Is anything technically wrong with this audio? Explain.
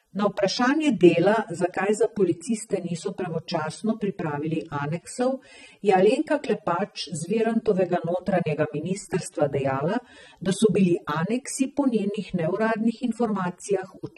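Yes. AAC compression throughout the speech: a low-bitrate AAC-LC encode, likely around 24 kbps, dropped high frequencies and starved bands, leaving dull, smeared sibilants with a fizzy, warbling texture.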